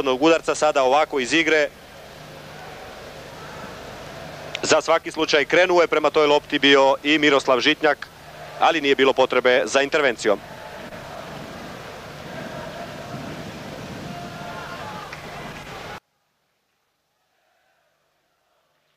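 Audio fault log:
15.98–18.97 s, one channel inverted: the level falls by about 36 dB and the centred content and low end nearly vanish, leaving a faint residue until the end. The likely cause is one stereo channel flipped in polarity, so shared material cancels when summed to mono.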